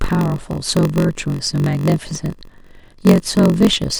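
From start to finish there's a steady buzz at about 46.9 Hz under the speech, the classic sign of a padded block size mismatch. Each block seems short of the 1024 samples the next stage reads, so zero-filled gaps break up the sound, and it all plays at 0.938 times normal speed with the timbre basically unchanged.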